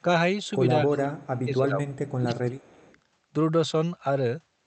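Between 0.82 and 1.89 s, the echo canceller likely could not separate the talker from simultaneous far-end sound, so this is speech suppressed in double talk: the voice sinks by as much as about 25 dB and breaks up in patches. From 1.89 to 2.14 s an echo leak follows, with residual loudspeaker pickup likely slipping past cancellation and returning as a faint copy 240 ms late, roughly 30 dB under the speech. The same suppression recurs from 2.18 to 2.87 s, about 25 dB deep, overlapping a second, fainter echo from 2.81 to 2.99 s at around 35 dB down.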